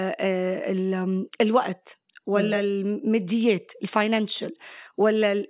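No technical fault can be heard anywhere in the speech recording, which keeps a steady, continuous signal throughout.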